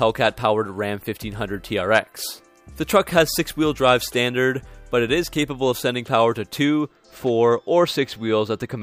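From about 6.65 s to the end at 8.83 s there's channel delay with comb filtering. One side runs a hair late, roughly two samples or about 0.05 ms, and summing to mono cancels the top end around 10 kHz, so the sound goes dull.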